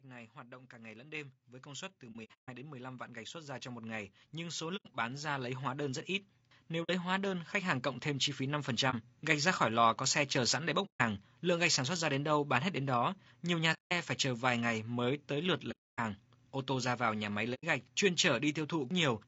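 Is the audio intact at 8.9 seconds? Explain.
No. From 8.90 to 8.95 s there is AAC frame loss with muting: the sound fades into a short hole of about 30 ms and fades back in, which fits a single lost frame whose spectrum the decoder replaced with silence. Because the overlapping transform windows taper both edges, the gap has soft shoulders. That sets it apart from a hard dropout or sample-level gap, which cuts off abruptly and usually leaves a tick at each edge.

Around that moment, as across the whole clip, the speech also sounds rough and grainy, with noise filling in between the harmonics and a dulled, somewhat synthetic top band. The likely cause is low-delay AAC compression such as AAC-ELD at a low rate, around 32 kbps. Its short frames resolve pitch harmonics poorly, so the graininess is steady throughout, unlike the brief, isolated hole at 8.9 s.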